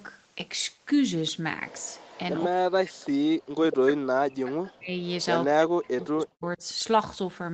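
From 1.68 to 2.2 s, and briefly at 3.02 to 3.06 s, a faint echo leak repeats the speech 168 ms late, about 25 to 30 dB down. A loudspeaker echo canceller likely passed through part of its residual echo. Speech suppressed in double talk follows at 2.47 to 2.96 s, 3.19 to 4.97 s and 5.47 to 6.63 s. The talker's speech drops by up to roughly 40 dB in patches, likely because the canceller attenuated the near talker along with the far-end echo while both sides spoke.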